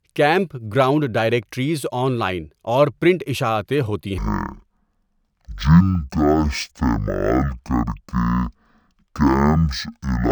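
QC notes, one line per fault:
4.18–10.32 s, stereo read as mono: after "اور پرنٹ اشاعتیں ہوتی" the speech drops to half speed and an octave lower. Interleaved left and right samples are read in sequence as one channel, stretching everything twofold, and a fainter mirrored copy appears in the upper spectrum.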